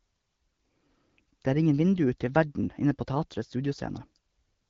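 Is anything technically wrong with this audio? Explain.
No, nothing here counts as a fault: this is speech carried over the AMR wideband (HD Voice) codec, and its light, band-limited character fits a rate around 12.65 kbit/s, where that codec is meant to sound clear.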